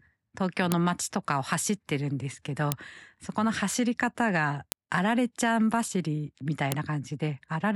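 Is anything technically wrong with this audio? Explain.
Yes. Sharp clicks land at 0.72, 2.72, 4.72 and 6.72 s, every 2.0 s regardless of the speech. This is a file header played as audio: the speech was sent or joined as 2-second WAV pieces, and each piece's header bytes were decoded as samples instead of being stripped. On a waveform, each appears as a brief, sharp spike; on a spectrogram, as a thin vertical line spanning all frequencies at those exact times.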